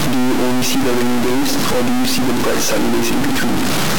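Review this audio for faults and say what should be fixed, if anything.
Across the whole clip the speech carries a harsh, buzzy distortion that follows the waveform, and the pauses are filled with loud noise rather than silence. This is a stuck bit, likely from a broken data line or converter fault: one bit is held fixed, so about half the samples jump by a step of roughly -10 dBFS, a high-order bit, and the error flips with the sign of quiet signals. Prevent it by checking converter wiring and running a bit-pattern test on the capture path before recording.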